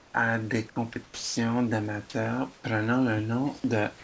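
It's a short speech clip, and the thing you notice is the background getting swapped for flat, featureless hiss at 0.00 to 0.14 s and again at 2.54 to 2.64 s. That's comfort noise in place of the background, most likely from discontinuous transmission. The sender went quiet during the pauses, and the receiver synthesised a rough stand-in for the room noise, which normally sits about 28 dB under the speech. The first patch comes in about 12 dB quieter than the real background. The second is only about 1 dB down, so you mostly hear the texture change rather than the level. The more damaging part is sound dropped by the voice detector, likely because it misread quiet stretches of speech as background. The speech drops to that same steady noise at 0.70 to 0.76 s, 0.94 to 0.96 s, 1.04 to 1.36 s, and 3.98 to 4.04 s, right at the end. The gaps eat roughly 40, 10, 240 and 50 ms of actual speech, and the 1.04 s one is by far the longest. 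Everything sits under 8 kHz, which fits G.722 at 64 kbps.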